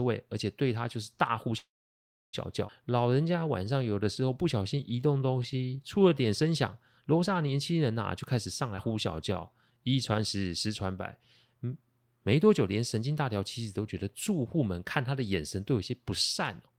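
At 1.57 s the speech stops and doesn't pick up again until 2.35 s. That's a call audio freeze. The last bit of sound trails on very briefly, then there's roughly 650 ms of plain silence. The likely cause is packets getting held up in transit until the jitter buffer ran dry. When the audio comes back it carries on exactly where it left off, so nothing is lost. About 758 ms of gap has just been inserted.

Shortly after, from 2.67 to 2.70 s, there's a skip ahead. Playback jumps forward with almost no seam, only about 11 ms of filler. Roughly 0.4 s of speech has been dropped, and the two sides are butted straight together. That's what happens when a chunk is discarded because later audio is already queued up.

Right after the jump, from 2.85 to 6.27 s, you get a jitter buffer slow-down. The receiver was rebuilding its reserve by repeating single pitch periods and bits of pauses over and over. 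The pitch stays put, but the speech runs at about 88% speed, so sounds get stretched. In total about 405 ms was added across that stretch.

The pattern repeats later on. There's a second skip ahead at 8.76 to 8.79 s, with about 13 ms of filler, where roughly 0.3 s goes missing and the join is abrupt. Then another slow-down runs from 8.88 to 10.12 s at about 90% speed, adding 136 ms of repeated pitch periods. It's milder than the first one, but you can still hear the drawn-out quality.

At the very end, from 16.63 to 16.77 s, there's a jitter buffer speed-up. The buffer was holding more than it wanted, so it trimmed out short pitch-period pieces, roughly a tenth of a second in total. For that brief tail the speech runs at about 173% speed at the same pitch, which sounds noticeably rushed.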